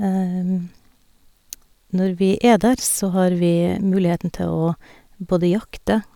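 No technical faults can be heard in this recording.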